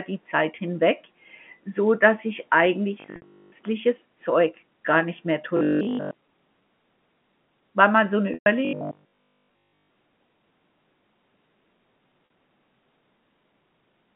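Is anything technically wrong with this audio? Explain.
Yes. There are two kinds of fault.

From 3.00 to 3.54 s, 5.57 to 6.15 s and 8.65 to 9.97 s, the sound becomes a rigid, metallic 50 Hz buzz: robotic sound from repeated short buffers. This is likely caused by audio arriving too seldom, so a roughly 20 ms chunk is repeated in place of the real signal. That happens throughout the first stretch and for most of the other two.

At 3.16 s (60 ms), 8.34 s (120 ms) and 12.26 s (40 ms) there is packet loss with pitch repetition. The last pitch period is held and faded. The short gaps give a held, buzzy note. The 120 ms gap fades to silence before speech cross-fades back.

The G.711 telephone band, about 150 Hz to 3.4 kHz, is audible throughout.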